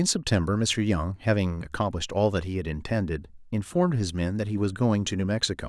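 No technical faults can be heard anywhere in the recording: the speech signal has nothing breaking into it.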